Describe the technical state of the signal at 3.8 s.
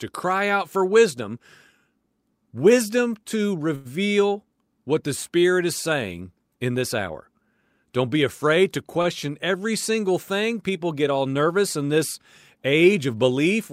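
At 3.8 s the signal is in a short stall from a late packet, running from 3.75 to 3.87 s. A packet missed its playout time, so the jitter buffer emptied and the receiver held the last sound for about 95 ms until it arrived, then resumed without losing anything. Playback is now 95 ms later. The sound is a brief held tone with a faint buzz or dip. On a spectrogram this shows as flat horizontal streaks; the waveform shows a repeating, uniform pattern.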